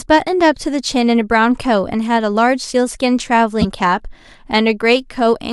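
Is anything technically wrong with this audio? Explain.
Yes. The speech has two instances of a corrupt frame decoded, from 2.60 to 2.62 s and from 3.61 to 3.65 s. Each event affects roughly a single compressed frame whose bits were damaged, but the decoder played it anyway. The misread gains and codes put energy at the wrong frequencies for the length of that frame, producing a short chirp or noise burst. The first is moderate in level. The second is much louder, peaking about 15 dB higher.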